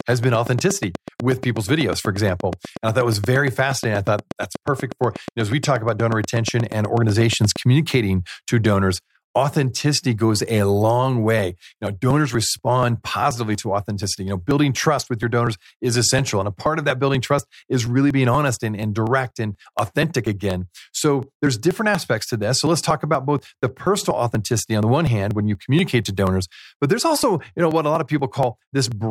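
A regular electrical pulse, most likely interference from nearby equipment or a struggling interface, gets into the signal from the very start until 7.57 s. The result is a train of clicks, about 8.3 per second and evenly spaced, some seventy in all, with peaks roughly 5 dB above the speech. The ticking runs steadily over the talking and through the pauses between phrases, like a fast, unchanging metronome laid on top.

From 11.39 s, just after "authenticity goes a long", to 28.92 s, something blocks the USB bus or audio driver every 0.24 s, and a short stretch of audio, around 10 ms each time, is simply skipped rather than filled. These periodic USB or driver dropouts produce roughly seventy ticks or jumps at an even pace of about four per second. They are heard only while speech is present and vanish in the silences, unlike the earlier clicks.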